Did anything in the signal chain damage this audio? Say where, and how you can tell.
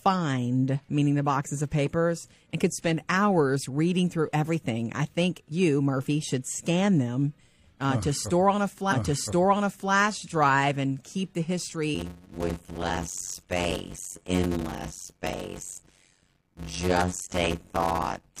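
Yes. From 11.94 s to the end, a block size mismatch (padded) in the driver or buffer stage leaves a zero gap in each block, causing a 91.9 Hz buzz and speech slowed to 0.53 times speed, consistent with 256-sample writes. Unlike a sample-rate mismatch, timbre stays normal.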